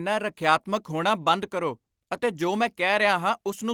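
Listening to the speech recording, nothing stood out as a technical problem at any point.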